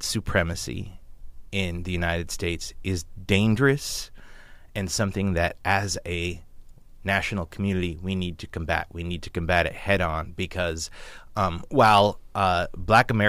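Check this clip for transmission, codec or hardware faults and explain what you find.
Nothing wrong turns up here; the speech comes through steady and intact all the way, with no transmission, codec or hardware trouble to point to.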